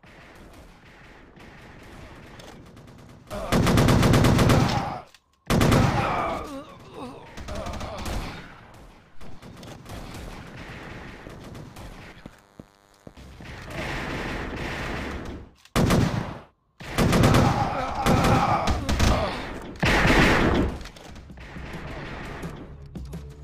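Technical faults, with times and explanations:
10.19–13.96 s, DECT cordless phone buzz: a nearby DECT handset or base was transmitting its short radio bursts every 10 ms, and the audio circuitry rectified them, adding a thin, steady 100 Hz buzz rich in harmonics, sitting roughly 35 dB below the sound.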